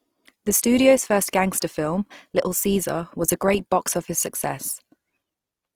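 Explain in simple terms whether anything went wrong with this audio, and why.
From start to finish, the speech sounds rough and grainy with a noisy edge, likely from Opus compression squeezing the audio hard and patching missing detail with noise.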